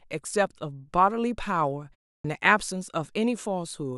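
At 2.18 s, after a 0.31 s pause, a clipped start after a pause swallows about 64 ms as the sleeping output wakes; the waveform jumps abruptly from flat silence, its onset missing.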